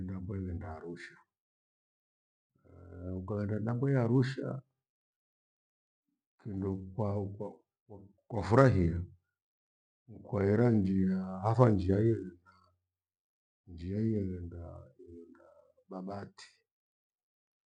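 A speech recording, with nothing technically wrong with it.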